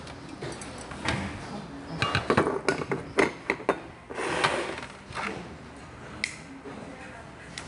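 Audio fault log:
Throughout: 4-bit ADPCM compression, samples coded as 4-bit predicted steps, so gritty hiss rides loud sounds; nothing above 10.6 kHz, which fits an 89 kbps stream.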